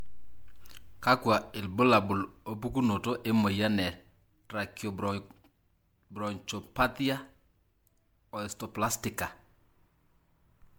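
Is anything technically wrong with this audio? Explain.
Yes. Throughout the speech there is generation loss: a swirly, hollow, smeared quality with softened attacks, though content reaches up to about 20.1 kHz. This is likely from roughly seven successive MP3 passes, consistent with 128 kbit/s, each requantising on a shifted frame grid so the damage accumulates.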